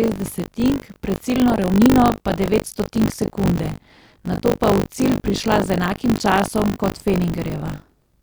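Buffer tearing runs throughout: writer and reader cross each period, splicing in a small slice of speech from a lap earlier, giving a robotic 50 Hz buzz.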